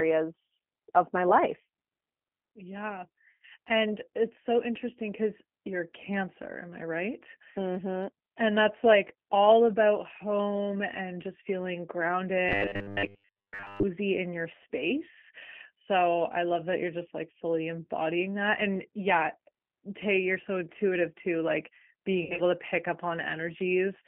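Speech carried through a G.729 codec for its whole length: nothing passes below 200 Hz or above 3.4 kHz, and the low-bitrate reconstruction gives the voice a plainly audible rough, synthetic edge, which marks it as a speech codec rather than simple band-limiting. VoIP packet loss concealed by the speech codec breaks in at 3.29 to 3.45 s and again at 22.23 to 22.41 s, just before "to pick up". Each time the voice smears into a buzzy tone or coloured noise that fades, and stays weak briefly afterwards. The gaps point to roughly 110 ms of lost audio scattered in short runs of up to 60 to 70 ms. From 12.49 to 13.84 s, just before "in your space", robotic sound from repeated short buffers imposes a rigid 100 Hz metallic buzz. That pitch fits 10 ms of audio being looped while most of the real signal is skipped, likely from audio arriving too seldom. Unlike concealment, it holds steady and does not decay.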